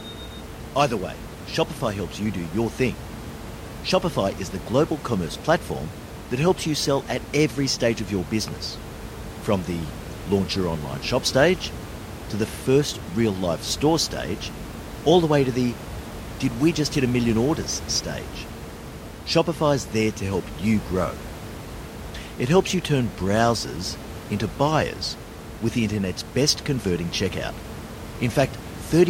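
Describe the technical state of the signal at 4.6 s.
At 4.6 s the signal is intact, with only the room's own background noise sitting about 13 dB below the speech.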